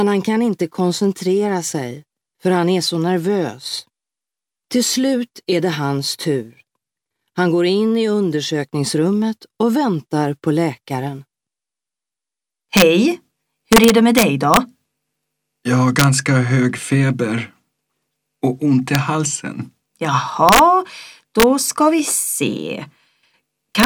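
Integer overflow cracks occur at 12.77–12.82 s, 13.73–14.57 s, 15.99–16.04 s, 18.95 s, 20.49–20.59 s, 21.40–21.43 s and 23.80–23.86 s. At each, the loudest peaks exceed the largest representable integer by only about 1 dB, but instead of being held at the limit they wrap around to the opposite extreme. The waveform jumps across its entire range, producing violent, sharp cracks far harsher than clipping. The longest run is near 14 s.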